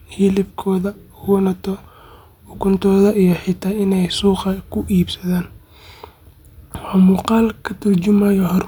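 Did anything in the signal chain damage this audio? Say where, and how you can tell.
No, nothing in this speech stood out on listening as damage from any stage of the signal chain.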